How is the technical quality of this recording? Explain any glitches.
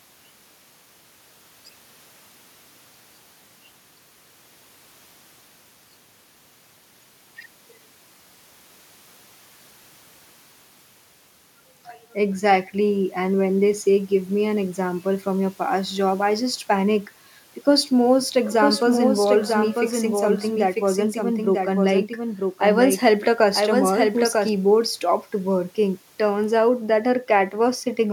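The recording has one glitch: a doubled audio track from 18.51 to 24.49 s. A second, full-band copy of the speech runs about a second behind the original at roughly 5 dB lower, most likely because the audio was captured again through a slower path or two out-of-step copies were left in an edit. Unlike echo or reverb, the copy has no decay or room colour, and it starts and stops abruptly.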